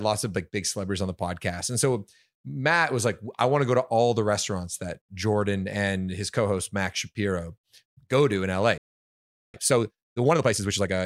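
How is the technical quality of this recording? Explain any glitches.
The recording has two linked playback glitches near the end.

From 8.78 to 9.54 s there is a playback stall: the speech halts mid-flow and the output goes completely silent for about 0.76 s. This is likely the player running out of buffered data or having its audio thread blocked. What separates it from a brief dropout or packet loss is the length of the gap.

From 9.54 to 10.94 s comes time-compressed catch-up. To clear the backlog left by the stall, the player cuts out small slices of audio and cross-fades the remaining pieces together, so the speech runs at about 1.5 times normal speed. Unlike simply playing the audio faster, this keeps the voice at its normal pitch rather than raising it. The delivery sounds hurried until normal timing returns.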